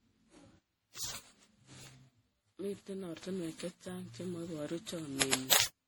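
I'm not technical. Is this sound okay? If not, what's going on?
No. The speech carries generation loss from start to finish: it sounds swirly, hollow and smeared, and the starts of sounds are blurred. The likely cause is the audio being saved in MP3 around ten times over, each pass adding fresh damage.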